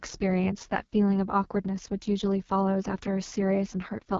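From start to finish the speech carries the marks of the AMR wideband (HD Voice) codec at its lowest quality, with the rough, raspy texture that points to a bitrate around 6.6 kbit/s. Below 6.4 kHz the voice is rebuilt from a coarse pulse-excited vocal tract model, so the harmonics sound grainy and buzzy. The 6.4 to 7 kHz band is filled with shaped noise, and nothing is present above 7 kHz.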